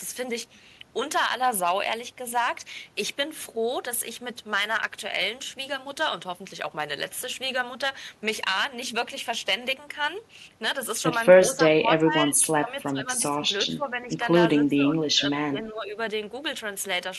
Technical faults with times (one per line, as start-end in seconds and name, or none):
0.00-17.18 hard clipping
11.54-14.12 speech suppressed in double talk
14.68-15.96 speech suppressed in double talk